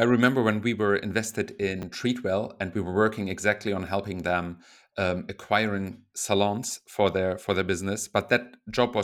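Right after "when we were invested", at about 1.79 to 1.83 s, there's a chunks out of order glitch: a 10 ms piece of audio turns up three chunks late and plays after the ones that should follow it, so you get a brief jumbled stutter.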